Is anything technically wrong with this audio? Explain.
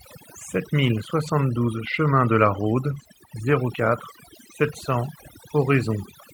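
Yes. Overdone noise removal runs throughout: aggressive spectral subtraction drops bands near the noise estimate, leaving a lowered background that breaks up into twinkling specks. Lost packets were rebuilt from error correction at 1.27–1.29 s and 2.91–3.05 s. The decoder substituted low-bitrate in-band copies, so there is no gap, but those 20 ms and 80 ms stretches sound rougher and noisier. The longer one fits four separate 20 ms packets.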